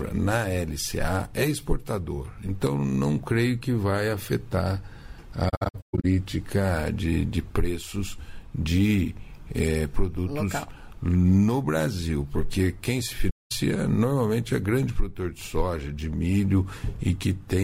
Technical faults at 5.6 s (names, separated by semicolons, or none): AAC frame loss with muting